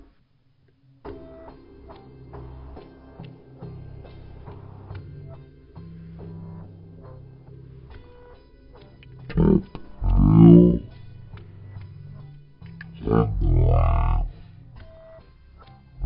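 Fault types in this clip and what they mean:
Wrong sample rate: The whole clip crawls along at one third of its proper speed and sits about 19 semitones lower, heavy, dark and dragging from start to finish. Speed and pitch have dropped together by the same factor, which means the samples are being played back slower than they were captured, with no rate conversion in between. A one-third ratio fits audio recorded at 48 kHz being played out at 16 kHz.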